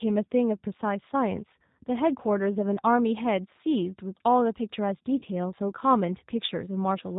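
The whole clip runs through what sounds like the G.729 codec at 8 kbit/s. Nothing above 4 kHz survives, and the speech comes out noticeably rough and synthetic.

There's VoIP packet loss concealed by the speech codec at 2.76–2.79 s and again at 5.19–5.23 s. The decoder stretches its last frame into a buzzy tone or coloured noise that fades, about 10 ms of lost audio the first time and about 30 ms the second.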